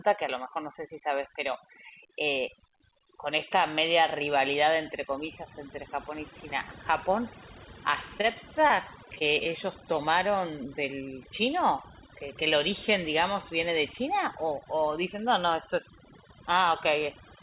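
Across the whole clip, overdone noise removal is at work: the suppressor was pushed so hard that any frequency band near its noise estimate is pulled down or switched off, and softer parts of the speech are cut along with the hiss. The background drops and breaks up into twinkling specks, and the call path's telephone band leaves nothing above 4 kHz.

From 8.18 to 9.47 s there is repeated packet loss with a robotic sound. Audio went missing again and again over this stretch, and each hole was bridged by stretching out the sound just before it, only for the next dropout to arrive soon after. The gaps are short, the longest about 24 ms, and the patched audio covers roughly a tenth of the stretch. The speech turns choppy and robotic, with small pieces missing.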